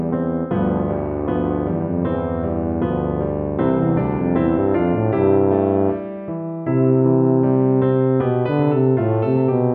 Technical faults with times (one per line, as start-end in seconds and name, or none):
none